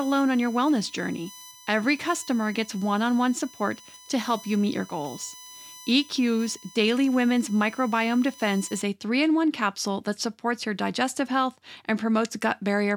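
From the start until 8.82 s, just before "a three in one", a USB whine sits under the speech. It is a steady tone of fixed pitch built on 1 kHz, matching the bus's 1 ms frame rate. Its harmonics are strong, and the loudest lies at 6 kHz. Current drawn by the bus in each frame has leaked into the audio through power or ground. It sits roughly 25 dB below the speech.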